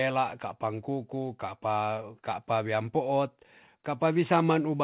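Nothing is technically wrong with this speech recording, which comes through a call path with the high end stopping at 4 kHz, just what you'd expect from a narrowband G.711-style codec.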